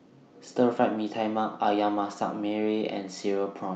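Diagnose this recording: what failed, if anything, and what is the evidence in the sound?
Nothing failed in this recording: the sound shows the expected call-path band limit, with nothing above 8 kHz, and no fault.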